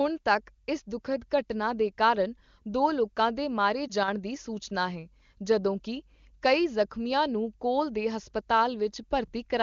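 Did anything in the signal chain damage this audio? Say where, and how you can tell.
Yes. A radio error corrupted one 20 ms frame at 3.87–3.92 s, so the AMR decoder filled it from the previous frame's settings, leaving a brief dip or warble.

From 4.03 to 4.08 s the level falls abruptly by about 6 dB, likely one channel dropping out ahead of the stereo-to-mono sum.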